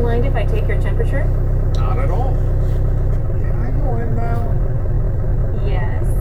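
A time-stretched section runs from 3.14 s to the end at 6.20 s. The audio abruptly slows to 0.645 times its pace with pitch unchanged, likely because software lengthened it by repeating short slices, so it drags.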